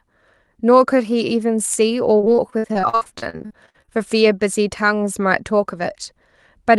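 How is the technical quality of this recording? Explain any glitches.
The recording has one clear problem: a burst of repeated packet loss (robotic sound) from 2.17 to 3.89 s. Its content stops near 12 kHz, which fits an Opus call path.

Across that stretch, about 25 short gaps, the longest 57 ms, are patched by stretching the previous sound, so about 37% of the span is concealed. It sounds choppy, with pieces missing. On a spectrogram, harmonics smear into flat repeated blocks between dropouts, and the waveform shows brief holes.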